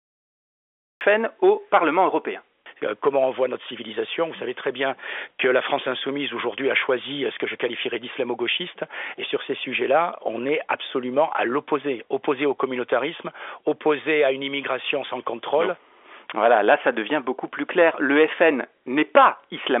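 Cut-off start, 0 to 1.01 s: the audio holds digital silence for its first second, and the speech then comes in at 1.01 s already in progress, with no natural onset or rise in level. That abrupt entry shows the recording or stream began late and caught the talker mid-sound rather than at the start of an utterance. The narrow telephone band of the G.711 line, with nothing above about 3.7 kHz, carries through the cut unchanged.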